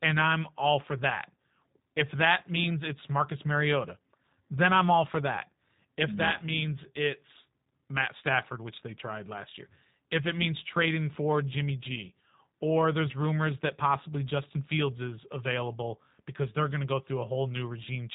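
From start to finish the speech sounds narrow and muffled, with nothing above about 3.8 kHz, and it carries a plainly audible rough, synthetic texture. That is G.729 codec damage, and the character fits the G.729A variant at 8 kbit/s. Rather than keeping the waveform, the codec rebuilds each 10 ms frame from a vocal tract filter, a pitch predictor and a few pulses, which leaves the speech intelligible but artificial.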